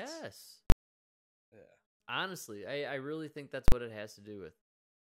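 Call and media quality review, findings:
Invalid numbers at full scale, speech: sharp bangs at 0.70–0.72 s and 3.68–3.72 s (after "I really think that's", before "what it"). DSP math outputs inf/NaN pinned at maximum, unlike clipping, which follows the waveform.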